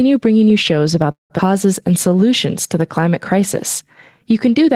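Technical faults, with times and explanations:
Throughout: gain pumping, likely from gain set too high into a fast limiter; level swings by about 5 dB, squashing level differences.
1.11–1.33 s: call audio freeze, likely packets delayed and the jitter buffer emptied after "bringing you shows"; sound stretches into a fading buzz or hiss, then about 140 ms of silence, adding a 185 ms gap with nothing lost.
1.38–1.42 s: skip ahead; buffered later audio played early, so roughly 100 ms of speech is dropped and the two sides join almost directly.
1.89–2.28 s, 2.80–3.42 s, 3.85–4.32 s: jitter buffer slow-down; repeated pitch periods rebuild the buffer reserve, slowing speech to 91%, 94% and 94% at unchanged pitch, adding 43, 45 and 36 ms.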